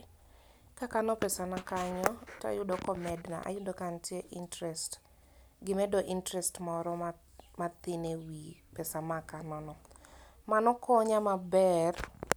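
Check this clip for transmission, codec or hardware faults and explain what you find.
No transmission, codec or hardware faults are audible anywhere in this speech recording.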